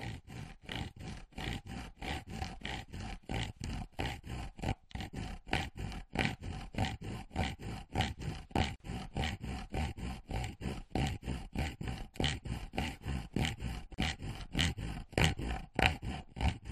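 At 8.76 s the sound drops out for about 45 ms, then resumes exactly where it left off; at 13.94 s a second dropout of about 37 ms follows. Both edges are smeared by the codec. These are gaps at joins of encoded pieces: each section was encoded on its own and spliced without trimming, so the encoder's start-up delay and the padding on each final frame remain as short silences inside continuous sound.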